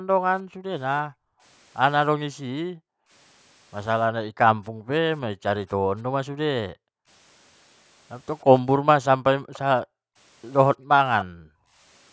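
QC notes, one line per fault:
0.00–1.43 s, 2.33–3.11 s, 4.09–7.08 s, 9.11–10.16 s, 10.77–11.80 s: background gated by the echo canceller. The room bed sinks by up to about 40 dB for roughly a second, half a second, two seconds and under a second twice, then returns when the canceller releases. While the loudspeaker plays, the canceller clamps the microphone, so only the ambience vanishes. A plain dropout would take everything with it, and a noise gate would follow the near-end level rather than far-end playback.
9.53–9.59 s and 11.21–11.25 s: echo leak. Two brief scraps of the speech return as a faint copy 290 ms behind the original, around 25 dB down the first time and about 15 dB down the second. Both land inside gated stretches. The likely cause is a speakerphone whose echo canceller let some of its microphone pickup through. Room reverberation is a smooth tail attached to the sound, while this is a distinct, delayed repeat after a clear gap.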